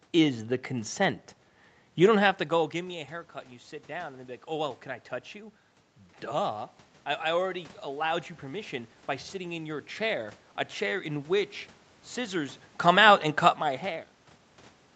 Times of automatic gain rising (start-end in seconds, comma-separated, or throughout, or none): 2.73-6.63